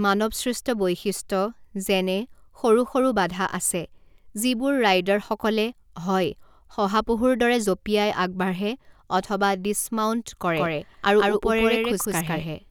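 From 10.57 s, just after "অথবা ডিছমাউন্ট", the speech suddenly gains a second copy of itself trailing roughly 150 ms behind and about as loud as the original, giving a stuttering, slapback double with no reverberant tail. It cuts in abruptly and continues to the end. This is a doubled audio track, likely from the signal being captured twice through a slower second path, so two identical full-band copies sit out of step.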